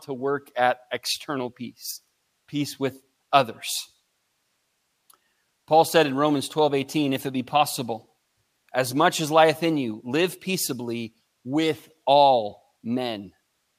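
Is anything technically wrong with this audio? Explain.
No, nothing technically wrong turns up anywhere in this speech recording, so there's nothing here to flag.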